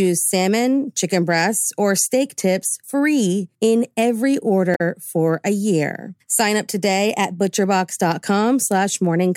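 Speech clip with one fault: damaged data in a compressed stream from 4.74 to 4.81 s, roughly 70 ms. Part of the encoded stream was corrupted there, so the decoder misread or discarded the affected frames and had to hunt for the next valid frame header before resuming. The result is a brief disruption that may sound like a chirp, squawk, click or short gap. On a spectrogram it shows as a narrow vertical strip where the speech pattern breaks off; the waveform shows a matching discontinuity.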